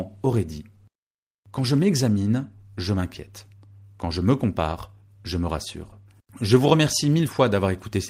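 No technical faults can be heard anywhere in the speech. There are no events to time or explain.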